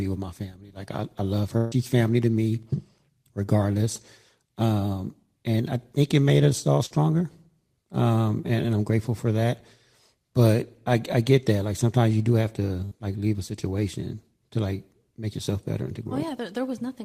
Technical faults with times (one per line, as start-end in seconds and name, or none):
1.57-1.74 burst of packet loss
6.86-6.99 burst of packet loss
12.85-12.93 burst of packet loss